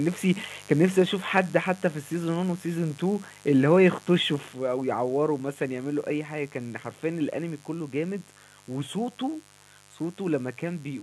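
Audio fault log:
throughout: mains buzz. A steady, raspy buzz sits under the speech, roughly 25 dB below it. It is built on 50 Hz mains, where sharp switching spikes twice per cycle spread harmonics up into the kilohertz range, giving the hum its edge.
1.02 s and 4.53 s: microphone volume stepped down. Speech and background both drop suddenly in level, by about 2 dB and then about 5 dB, each in a single step. This is likely call software lowering the microphone input volume after judging it too loud.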